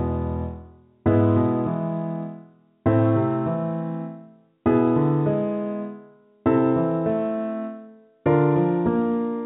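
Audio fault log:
No faults logged; the sound passes through a WebRTC call path with G.711 A-law at 64 kbps, and nothing is heard above 4 kHz.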